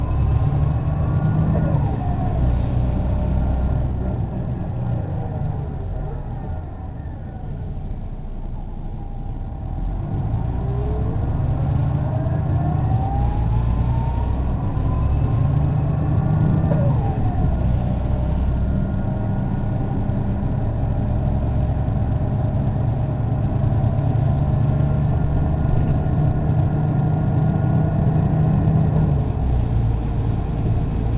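There are no technical faults to describe in time order in this clip.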